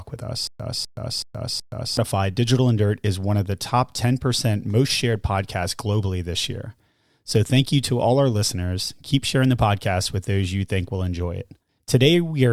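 From 0.47 s to 1.97 s the speech breaks into a stutter with silent gaps: a 251 ms fragment plays, then 124 ms of dead silence, and the same fragment returns four times on a steady 375 ms cycle. The likely cause is a stalled stream replaying its last buffer on each retry before running dry, so the audio meant for that stretch is lost. On a waveform this appears as identical blocks separated by flat, near-silent lines. A spectrogram shows repeated copies of one pattern with fully blank columns between them.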